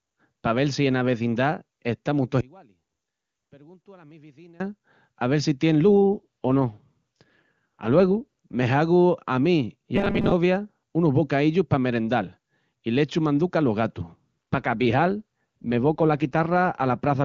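Speech coded with AMR wideband (HD Voice). From 2.41 to 4.60 s the level falls by about 28 dB and the centred voice nearly vanishes. One channel is likely inverted, so the mono sum cancels. From 6.14 to 8.22 s and again from 14.53 to 17.23 s, an AMR rate drop makes the voice rough and synthetic. This fits a fall from 23.85 to 8.85 kbit/s. From 9.96 to 10.32 s the voice becomes a rigid, metallic 200 Hz buzz, with most of the real audio skipped. The likely cause is robotic sound from repeated short buffers of about 5 ms.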